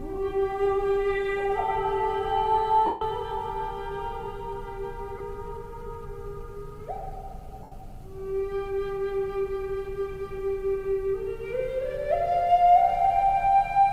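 At 2.86 s, 5.18 s and 7.63 s, lost LE Audio frames leave gaps of 150 ms, 22.5 ms and 82.5 ms that the LC3 decoder fills by replaying the last spectrum with scrambled signs. Unlike a clean dropout to silence, each gap is a brief noisy smear that fades on the longest loss.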